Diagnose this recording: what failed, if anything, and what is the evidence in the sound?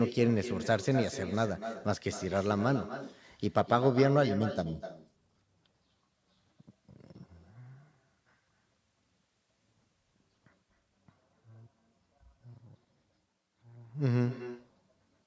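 Every phrase is trailed by a fainter, thinner copy arriving roughly a third of a second later, sitting about 11 dB below the direct speech, and it persists through the whole recording. This is echo with no canceller, a call-processing failure: the far end's loudspeaker output was picked up by its microphone and returned across the network, and no echo canceller removed it. The high-pass filtering and the band ending at 8 kHz come from the call microphone processing.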